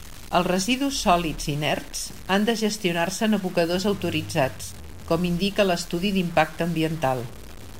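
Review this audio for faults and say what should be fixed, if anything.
Grainy distortion tracks the speech throughout, likely low bit depth without dither: a sound consistent with 6-bit truncation, error about 20 dB down, visible as staircase waveforms and spectrogram hash. Prevent it by keeping a higher bit depth and dithering before any reduction.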